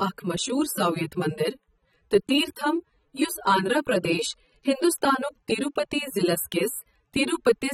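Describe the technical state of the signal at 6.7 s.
At 6.7 s, as through the whole clip, the speech has likely been through AAC compression. The encoder drops fine spectral detail to save bits, and the damage is plainly audible, which fits a low rate around 24 kbps. Nothing reaches above 16.5 kHz, so the top end sounds dull, and the coarse quantisation leaves a smeared, warbling or fizzy texture, most noticeable on sibilants and sustained sounds.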